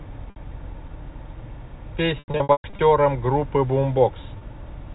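Packet loss with pitch repetition at 0.30–0.36 s, 2.19–2.79 s and 4.38–4.41 s: the last pitch period is repeated over missing audio. Short gaps sound held and buzzy. The middle stretch loses about 390 ms, with runs up to 120 ms fading toward silence.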